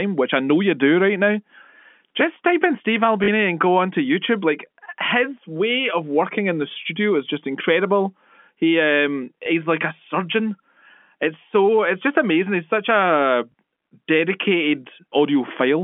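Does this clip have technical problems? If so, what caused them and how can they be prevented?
Yes. One brief robotic stutter and two small blips come from packet loss with the last packet repeated: at 3.24 s (40 ms, just before "and go onto"), at 9.44 s (20 ms, before "like a surgeon") and at 13.52 s (20 ms, after "such a"). The receiver replayed the previous packet until fresh audio arrived. That sounds like 20 ms packets, and the first gap fits two of them. The two-packet run buzzes at about 50 Hz. That buzz sets it apart from a plain dropout, which would leave silence. The narrow telephone band, roughly 200 Hz to 3.4 kHz from G.711 coding, is the normal line sound and not a fault. Prevention: use a jitter buffer with proper packet loss concealment, and add redundancy or forward error correction on the link.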